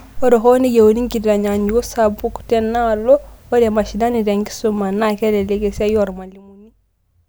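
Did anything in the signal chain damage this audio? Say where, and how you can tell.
Yes. Zipper noise from an unsmoothed gain stage, likely in the driver or buffer processing, appears from 6.0 to 6.42 s, right after "ketelelek esiaai". The level falls roughly 25 dB in 1 dB steps at about 50 per second. The waveform shows a staircase envelope, and a spectrogram shows faint vertical broadband ticks spaced about 20 ms apart.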